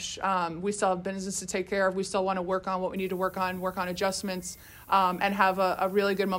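Low bit depth with noise shaping runs from 2.96 s to 6.39 s. The audio is cut to 8 bits, and the rounding error is pushed up in frequency. The result is a steady, thin hiss, about 20 dB below the signal, rising sharply toward the top of the band.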